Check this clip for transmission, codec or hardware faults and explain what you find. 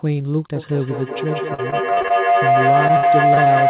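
Two faults stand out, heard through a narrowband call path with nothing above 4 kHz, which fits a G.711-type codec.

Feedback howl runs from 0.55 s to the end of the clip. A microphone-to-loudspeaker loop between devices in one room gains level on each trip, so a tone around 700 Hz keeps growing to about 7 dB above the speech, pulsing roughly every fifth of a second. Unlike an echo, it swells rather than decays.

Repeated packet loss (robotic sound) occurs from 1.54 to 2.12 s and again from 2.88 to 3.48 s. Lost or late packets leave a run of short holes, the longest 41 ms and 58 ms, each patched by stretching the preceding sound. The speech turns choppy with pieces missing, unlike the tonal howl.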